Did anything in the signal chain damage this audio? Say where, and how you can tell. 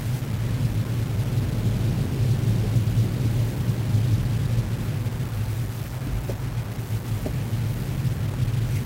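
Yes. A grainy, rasping distortion runs through the whole clip and rides on the sound itself, with the error sitting only about 20 dB below the signal. That points to the sample-format conversion stage, likely a requantisation to very low bit depth without dither, with values rounded to something like a 5-bit word. Dithered reduction would leave a steady hiss independent of the material, but here the grit appears and changes with the sound, so the error is correlated with the signal.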